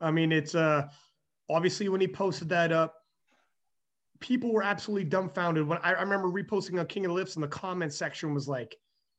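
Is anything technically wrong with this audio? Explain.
No, nothing is technically wrong with this audio.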